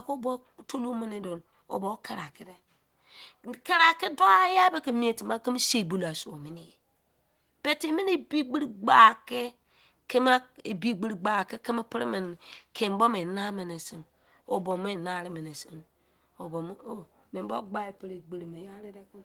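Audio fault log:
No faults heard in this clip.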